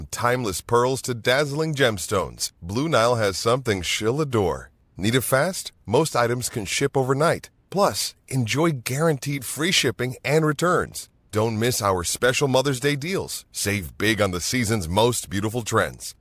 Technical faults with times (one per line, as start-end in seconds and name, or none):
none